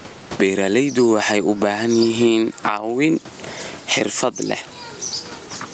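Throughout the speech, the level swings by around 15 dB, with loud and soft parts pulled closer together and the dynamics sounding squashed. This gain pumping likely comes from input gain set far too high, with a fast limiter clamping each peak.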